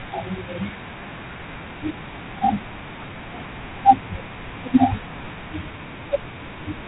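Throughout, the speech has that G.726 ADPCM rasp: a coarse hiss riding the level, nothing above 3.8 kHz, which sounds like the 24 kbit/s mode.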